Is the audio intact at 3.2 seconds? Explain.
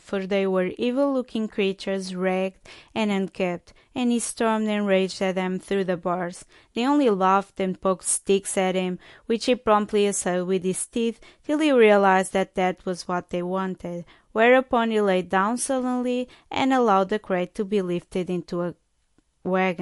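No. At 3.2 seconds the speech carries the same damage heard across the whole clip, most likely MP3 compression at a low bitrate, around 50 kbps. Nothing remains above 11.3 kHz because the encoder drops the treble at a fixed point, and weak frequency lines flicker on and off between frames. That gives a clearly audible watery, swirly texture with chirpy sibilants. A simple low-pass filter would dull the top end without adding that warbling.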